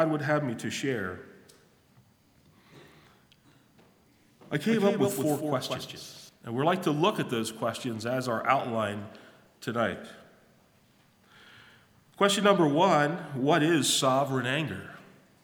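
From 4.69 s to 6.29 s the audio is a doubled audio track: a second full-band copy trails the original by about a fifth of a second, a few decibels quieter, with no decay. It likely comes from the same signal being captured again through a slower path, and it begins and ends abruptly.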